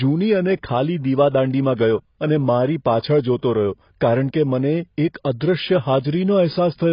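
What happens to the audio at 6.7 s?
At 6.7 s the speech still carries AAC compression, as it does throughout. Nothing sounds above 5.1 kHz. It is dull and smeared, likely from AAC coding at a low bitrate near 16 kbps.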